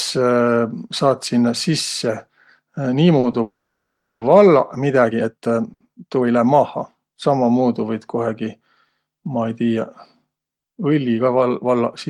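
At 3.19 to 3.25 s there is a short stall from a late packet. The jitter buffer ran dry for a moment, so the receiver held the last sound for about 40 ms until the packet turned up, then carried on from the same point. Nothing is lost. The sound is briefly drawn out, with a faint buzzy sustain where it should have moved on.

Shortly after, from 3.42 to 4.23 s, the audio stops dead for roughly 0.8 s. The last sound trails off as a fading buzz, and about 690 ms of that span is silence before speech resumes exactly where it left off. This is likely a call audio freeze: packets were held up in transit, the jitter buffer emptied, and the receiver bridged the wait with concealment, adding about 790 ms of delay without dropping content.

From 4.93 to 7.33 s the pace jumps abruptly while the pitch stays put. This sounds like a time-stretched section, with software likely compressing the audio to fit a shorter length by discarding short pieces, running it about 1.45 times faster. 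The result is rushed.

Inside that stretch, at 5.73 to 5.82 s, another short stall from a late packet appears. The buffer underran again and the receiver extended the current sound by about 70 ms. It comes across as a short held tone with a slight dip before normal flow resumes.

Near the end, from 10.98 to 11.42 s, a jitter buffer speed-up runs the audio at about 112% of normal pace. The buffer was holding more than its target, probably after delayed packets arrived in a bunch. To work the delay back down, the receiver trimmed around 70 ms in small pitch-period slices. Pitch is unchanged, but the delivery sounds hurried over that half-second.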